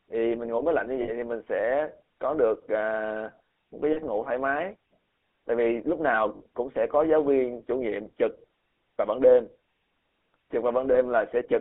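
Throughout, the speech carries the buzzy, gravelly roughness of the GSM full-rate codec, its excitation rebuilt from sparse regular pulses. The spectrogram shows a band of about 250 Hz to 3.5 kHz with nothing above, and coarse striated harmonics, consistent with 13 kbps coding.

Lost GSM frames occur at 1.02 to 1.11 s, 3.92 to 3.98 s, 6.36 to 6.45 s and 10.92 to 10.97 s. Each time, the decoder repeats the last good frame. The result is a brief metallic ring, shown as frozen horizontal streaks in the spectrogram.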